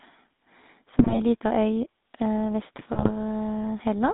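A buzzy, gravelly roughness runs through the whole speech clip, with nothing heard above about 3.7 kHz and little below 200 Hz. That is the GSM full-rate codec, which fits a 13 kbps link: it rebuilds the voice from a vocal-tract filter driven by coarse, regularly spaced pulses, so fine detail turns to grit.

From 0.98 to 1.18 s the voice breaks into squawks, pops and gargling, and again, a little less severely, from 2.92 to 3.11 s. These are GSM bit errors. Corrupted bits, at about 5% and then about 2%, reached the decoder and scrambled the filter, pitch and gain values across a run of frames, bending the spectrum and making the level jump.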